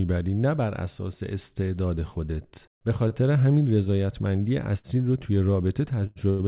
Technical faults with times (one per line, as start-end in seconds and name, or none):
3.08-3.13 short stall from a late packet
4.79-5.00 short stall from a late packet
6.07-6.41 short stall from a late packet